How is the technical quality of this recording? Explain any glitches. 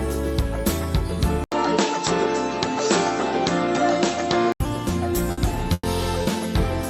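The recording has clear faults: one stretch of narrower, changed sound and several dropouts late in the clip.

From 1.44 to 4.60 s the input switched to a poorer device, likely a change of microphone or headset profile. After an 80 ms silence, nothing is left above 7.8 kHz and a faint new noise floor appears, while the level stays about the same. A spectrogram shows a flat ceiling on the content and a gap at the switch.

At 5.31 to 5.39 s and 5.73 to 5.85 s there are bursts of packet loss. The receiver stretched the last sound for 60 ms and then 100 ms, fading it, with 20 ms of silence in the second burst. Each gap sounds like a held, dimming buzz or hiss. The waveform shows a decaying plateau followed by a jump.

At 6.23 to 6.27 s a short concealed packet loss left 20 ms patched from the preceding sound, heard as a brief smear or wobble. It appears as a tiny blurred patch on the spectrogram.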